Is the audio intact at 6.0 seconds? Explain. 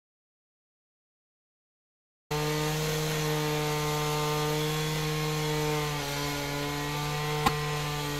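Yes, the audio is intact at 6.0 seconds, with no fault at that moment.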